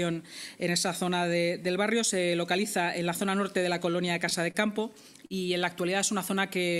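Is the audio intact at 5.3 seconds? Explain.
No, a short stall from a late packet occurs from 5.26 to 5.33 s. A packet arrived late and the jitter buffer ran dry, so the receiver stretched the last sound for about 40 ms until it came, then resumed, losing nothing but adding 40 ms of delay.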